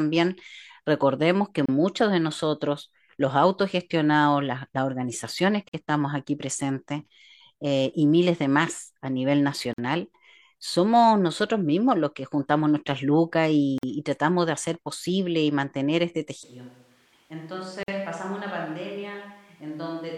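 Short silences open in the speech at 1.66 s (about 30 ms), then at 5.69 s, between "autogestionados las las organizaciones" and "estamos aquí presentes eh", at 9.73 s after "de más a nivel", and at 13.78 s, each 49 ms. These are gaps at joins of encoded pieces: separately encoded segments were spliced with their encoder start delay and end padding left in. The exact 4 s spacing and the speech resuming exactly where it stopped set them apart from random dropouts.

From 16.43 s, after "posible y mantener este", the speech turns suddenly roomy and hollow, with thinner bass, a drop of about 10 dB and room noise only about 30 dB below the speech, lasting to the end. This is a switch to a distant microphone, likely from the close mic failing. Tone, level and noise change together in one step, which distinguishes it from added reverb or a simple gain drop. The 4 s gap pattern continues through it, with another 49 ms gap at 17.83 s.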